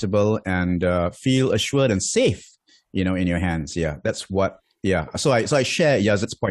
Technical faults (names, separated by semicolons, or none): none